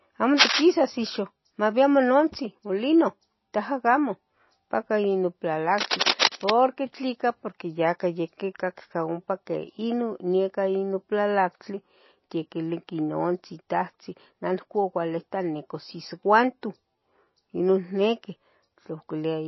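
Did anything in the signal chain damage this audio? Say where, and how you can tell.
Yes. At the codec stage, plainly audible watery artefacts run throughout, and a spectrogram shows nothing above 5.8 kHz. This is likely MP3 compression at a low bitrate near 24 kbps.

In the analogue wiring, cable scratch noise from a likely worn contact appears at 0.38–0.65 s (about 10 dB over the signal) and 5.78–6.51 s (about 5 dB), as dense, ragged waveform bursts.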